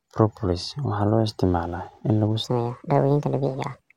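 From 2.44 s to the end of the clip at 3.96 s, the speech suddenly turns higher and hurried, pitched up by about five semitones and running 1.34 times too fast. This section at the wrong speed is likely from playback against a mismatched clock.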